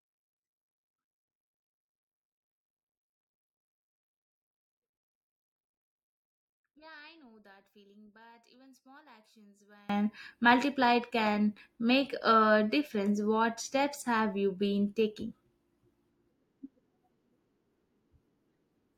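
From 0.0 to 9.89 s, one stereo channel likely has its polarity inverted, so that when the two channels are summed to mono, the speech common to both cancels almost completely. The level drops by about 29 dB, leaving a faint residue made only of the small differences between the channels. Normal level returns just before "multiplied can make a".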